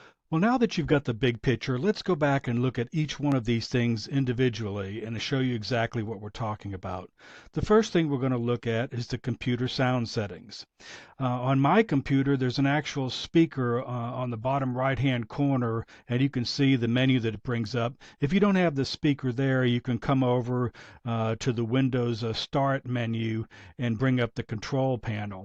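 At 3.32 to 3.34 s a single loud pop cuts in, peaking around 10 dB above the surrounding sound. It is most likely a voltage spike from a plug, switch, static or driver glitch, heard as one sharp thump while the audio continues beneath it.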